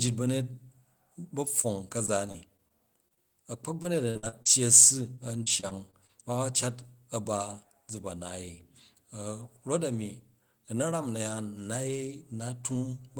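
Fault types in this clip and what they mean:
Short concealed packet loss: About 20 ms of audio failed to arrive at the decoder in time, and the receiver bridged each hole by extending the preceding sound before blending back into the real signal. It occurs at 1.61 to 1.66 s, then twice in quick succession at 3.08 to 3.12 s and 3.14 to 3.18 s, each patch lasting roughly 20 to 25 ms and heard as a brief smear or wobble.
Repeated packet loss (robotic sound): Over three stretches, holes recur close together, and each is concealed by continuing the last sound before the next loss arrives, giving choppy audio with pieces missing. At 2.06 to 2.72 s there are four gaps, about 80 ms lost, 11% of the span. At 3.82 to 4.47 s five gaps total 200 ms, the longest 56 ms, 29% concealed. At 5.15 to 6.11 s six gaps lose 140 ms.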